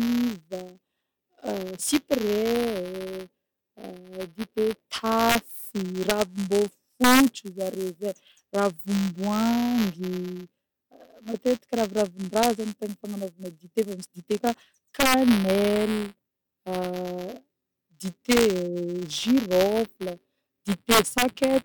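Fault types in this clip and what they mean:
Buffer tearing: A steady robotic buzz near 172 Hz rides under the speech wherever there is signal. That rate fits a 256-sample buffer, where writer and reader have slipped so a small slice of each period repeats audio about 10 ms old.
Integer overflow: Eight sharp, violent cracks erupt on the loudest moments of the speech, far harsher than clipping. Peaks only about 0 to 2 dB past full scale wrapped around to the opposite sign instead of being limited.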